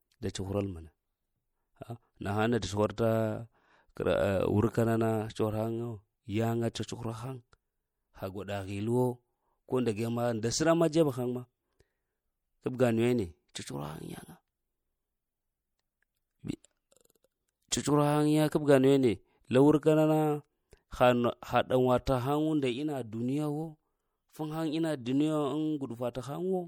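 Speech runs the whole way through with clearly audible codec damage. The sound has a watery, swirly quality, s sounds come out with a metallic chirp, and nothing reaches above about 20.8 kHz. That points to MP3 compression, likely at something like 64 kbps, where the encoder runs short of bits, drops weak frequency lines that then flicker between frames, and trims the very top. On top of that there's pre-echo at 0.33, 6.74, 13.54 and 17.71 s. Each sharp attack gets a short hiss smeared about 15 ms ahead of it and lands soft. That happens because the transform block spreads the noise sized for the loud onset back into the quiet moment just before it.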